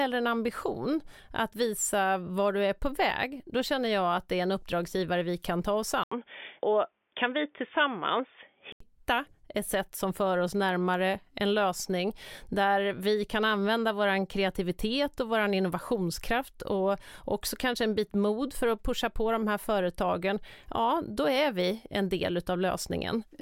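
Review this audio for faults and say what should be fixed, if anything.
Right after "vi kan ta oss", at 6.04 s, the speech drops out for 80 ms and comes back dull and boxy, with nothing above 3.6 kHz and a faint new background noise well below the speech; loudness stays about the same. At 8.80 s the full, clear sound returns. This is likely an input switched to a poorer device mid-recording. Locking the recording to a single fixed microphone prevents it.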